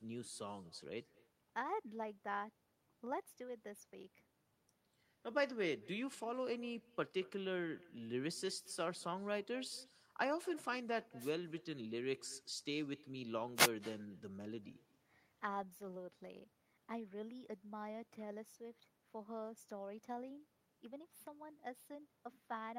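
Echo with no canceller runs through the whole clip: each phrase returns roughly a fifth of a second later, about 23 dB below the speech, sounding thin. The far end's loudspeaker feeds its own microphone, and nothing removes that pickup before it travels back.

Wireless microphone noise hits come at 11.19 to 11.31 s and 13.55 to 13.70 s, two short swishes of static laid over the speech. The analogue FM radio link fades as reflected signals cancel at the receiver, and receiver noise rises into the gap.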